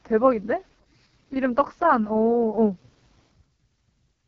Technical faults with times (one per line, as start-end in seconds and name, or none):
0.00-4.27 AMR wideband (HD Voice) codec